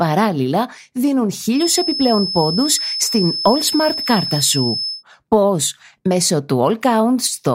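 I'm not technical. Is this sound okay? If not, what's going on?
No. From about 1.51 to 5.04 s there's a feedback whistle: a thin, steady high tone around 5.2 kHz sitting just a bit quieter than the speech and slowly swelling and fading. The likely cause is a loudspeaker feeding back into the microphone, right on the edge of howling.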